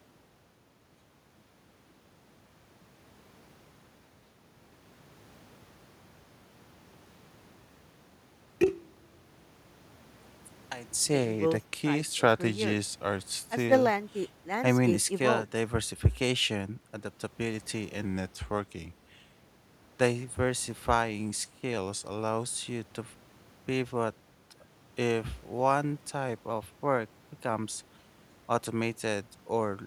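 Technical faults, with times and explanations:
11.39–13.69 s, 18.05–19.35 s and 21.78–22.45 s, drift correction step: clock-matching software likely dropped the playback rate in one jump to rebuild its buffer, so the speech runs about 6.4% slow and sags roughly 114 cents, just over a semitone, before snapping back.
26.50–27.49 s, drift correction step: the rate was likely pushed up in a single jump to drain excess buffered audio, so the speech hurries about 6.4% fast and rises roughly 107 cents, about a semitone, then abruptly returns to normal pitch.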